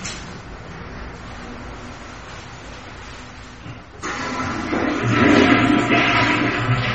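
From start to finish the whole recording carries MP3 compression damage, and it's plainly audible. Nothing comes through above about 8.3 kHz, so the top end sounds dull. The likely cause is an encoder that ran short of bits, which fits a rate around 32 kbps. It chopped off the treble at a fixed point and dropped weak frequency lines that flicker in and out between frames, giving the sound a watery, swirly texture with smeared attacks.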